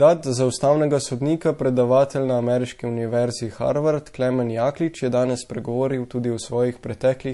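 Throughout the clip the speech carries plainly audible MP3 compression artefacts, likely from a low bitrate, around 48 kbps. Nothing survives above 11.3 kHz, and quiet spectral detail flickers between frames, giving sibilants a watery, swirly quality and softening consonant onsets.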